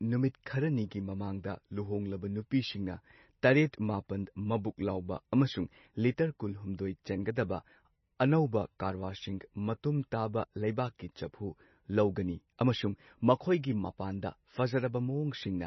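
Throughout the speech the treble stops sharply at 5.9 kHz, and the sound is watery and swirly with smeared consonant onsets. This is likely MP3 compression under heavy bit starvation, which fits a bitrate around 25 kbps, with weak frequency lines dropping in and out between frames.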